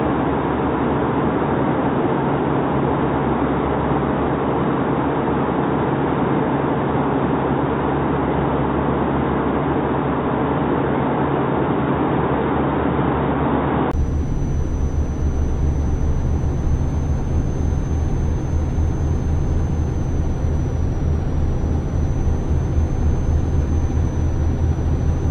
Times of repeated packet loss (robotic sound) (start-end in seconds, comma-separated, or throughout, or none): none